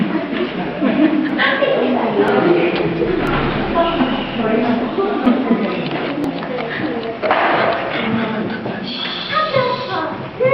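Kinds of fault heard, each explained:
Overlap between stream segments: adjacent 1 s segments carry overlapping time stamps, so the player discards 5 to 10 ms of genuine audio at six joins. The waveform jumps, giving short clicks or skips at 1.29, 2.28, 3.27, 5.26, 6.24 and 7.23 s.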